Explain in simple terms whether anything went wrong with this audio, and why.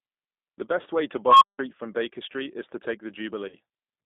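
Yes, three things went wrong. The whole recording went through the G.729 codec, a compressed phone-call format that rebuilds speech from a simplified model of the voice rather than storing the actual sound. Only a narrow band from about 200 Hz to 3.7 kHz survives, so it sounds like a phone line. The damage is plainly audible: the speech is slightly rough and synthetic. Plain muffling would lose brightness without adding this artificial grain.

From 1.27 to 1.59 s there is an unstable filter. A piece of processing fed its own output back into itself with bad settings, so a tone near 1 kHz swells from nothing to full loudness in about 0.14 s and distorts. Then the sound cuts out completely for about 0.17 s while the filter resets. A feedback howl from a microphone builds more slowly and doesn't end in sudden silence like this.

From 3.48 to 3.56 s there is VoIP packet loss concealed by the speech codec. 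About 40 ms of data went missing, which fits two lost packets. The decoder filled the gap by stretching the last bit of speech into a buzzy tone or coloured noise that fades. Because it copies what came just before instead of dropping to silence or clicking, this is a concealed loss rather than a plain dropout.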